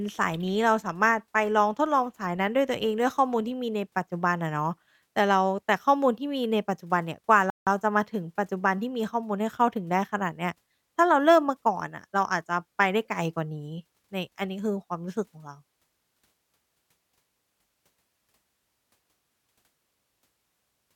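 At 7.50 s the player likely ran out of data or was blocked, a playback stall: the speech cuts to silence for about 170 ms, then resumes.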